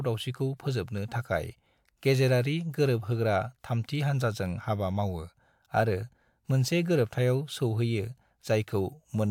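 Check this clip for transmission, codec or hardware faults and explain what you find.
One codec fault turns up, in the speech at 4.56 to 4.60 s, just after "गेजेरारि गोरोबहोग्रा थामथि हानजाजों". Compressed frames were skipped: about one frame, which fits a 42.7 ms frame length, was lost or rejected by the decoder. The audio jumps ahead by roughly 40 ms.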